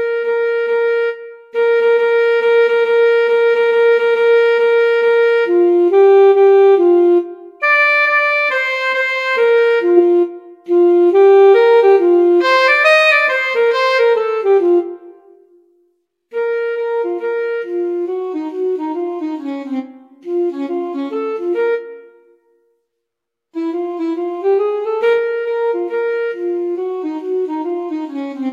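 No technical faults can be heard anywhere in this audio.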